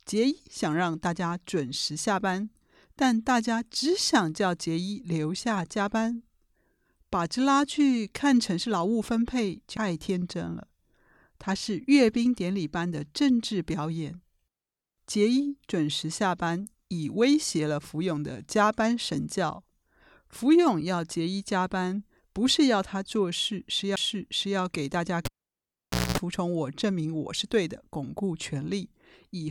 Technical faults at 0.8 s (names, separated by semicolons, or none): none